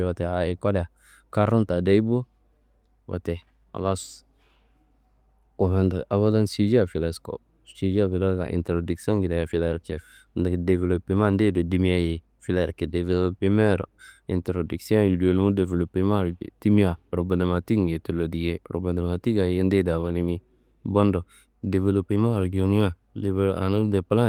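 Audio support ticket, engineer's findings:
No audio faults found in the speech clip; nothing to attribute to any component.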